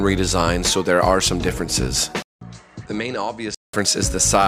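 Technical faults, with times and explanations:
2.22–3.74 s, input switched to a poorer device: input likely jumped to another microphone after a 0.19 s silence, so the sound dulls above 9 kHz, drops about 10 dB and gains faint new noise.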